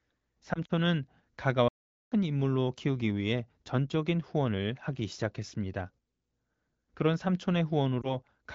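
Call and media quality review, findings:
Lost AMR speech frames, 0.53–0.71 s. Brief warbles and dips scattered over about 160 ms, roughly 60 ms of audio missing, longest gap 40 ms. Points to three dropped 20 ms frames. Decoder concealment repeats the last good pitch and tract settings with fading gain. Recovery rough for a moment.

Lost AMR speech frames, 8.01–8.16 s. Single short dip, about 20 ms. Fits one lost frame. Concealment bridges it with a brief warble.

Playback stall, 1.68–2.12 s. Audio stops mid-flow for about 433 ms of silence, then resumes. Likely cause: player buffer underrun or blocked playback thread. AMR-WB path at 15.85 kbit/s, light codec coloration only.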